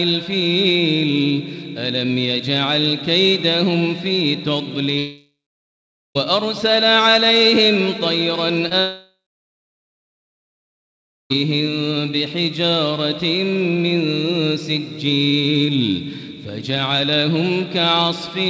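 Audio over a call link band-limited to 8 kHz, consistent with G.722 at 64 kbps, with two gaps at 4.98–6.17 s and 8.80–11.32 s. Each begins with a fading continuation of the last sound and then falls to silence, about 0.84 s and 2.15 s. Audio resumes later with that stretch missing, likely a long network dropout. Unlike brief concealment, these gaps run on long enough for the fill to die away. Just before the second gap, at 8.69–8.72 s, a short concealed packet loss leaves only a brief smear. About 20 ms of audio was lost and smoothly patched from the preceding sound before the real signal returned, with no audible silence, which separates it from the dropouts.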